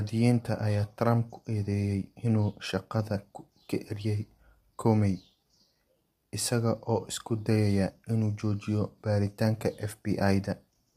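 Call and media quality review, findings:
Grainy, rough speech throughout, noise between harmonics, cut above 15.6 kHz; likely low-delay AAC compression, short frames smearing pitch, fits 32 kbps. Continuous, unlike packet-loss dropouts.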